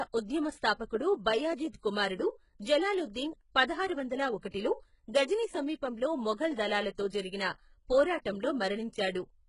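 Throughout this speech clip the treble sounds synthetic and grainy: s sounds come out gritty and lispy, the upper range has a metallic sheen that doesn't quite belong to the voice, and nothing at all reaches above about 11.1 kHz. The likely cause is heavy HE-AAC compression at a very low bitrate, around 12 kbps. At that rate the codec spends its bits on the lower spectrum and fills in the highs by spectral band replication, copying lower bands upward under a coarse envelope, so the rebuilt harmonics don't line up with the real ones. At 4.5 s a hiss creeps in roughly 39 ms ahead of a sharp onset, running to about 4.54 s, and the attack itself sounds softened and smeared. This is pre-echo. The transform codec spreads its quantisation noise evenly across a whole block, so the noise budgeted for the loud attack also fills the quiet moment just before it.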